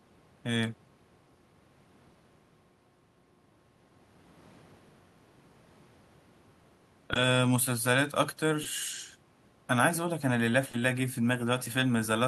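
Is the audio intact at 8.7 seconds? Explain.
No. From 8.63 to 8.67 s the speech briefly smears where about 20 ms of audio is missing. This is short concealed packet loss: the data arrived too late to decode, so the receiver extended the preceding sound to fill the gap and then blended back into the real signal.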